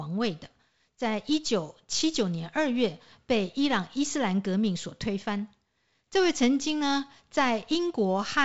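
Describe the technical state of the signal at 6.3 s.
At 6.3 s the speech is intact, with no fault present, carried by G.722 wideband telephone coding at 56 kbit/s with nothing above about 7.7 kHz.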